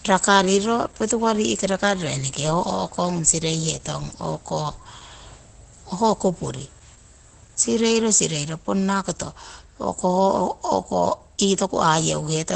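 It's a speech clip with heavy damage from what's likely Opus compression, throughout: muffled and hoarse, with nothing above about 8.7 kHz. That narrowed band and roughness fit the codec's speech mode at a very low rate, somewhere near 12 kbps.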